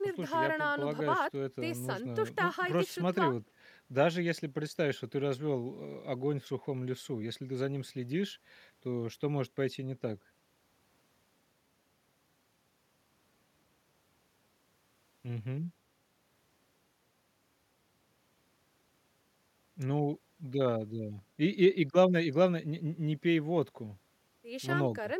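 Speech recording with no audible technical faults anywhere in it.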